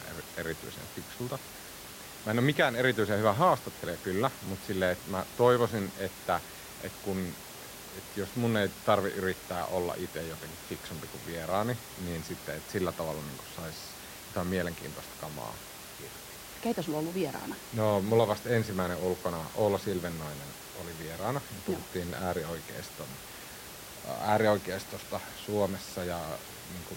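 No system faults are audible in the speech; the room background sits about 14 dB below it and belongs to the recording itself.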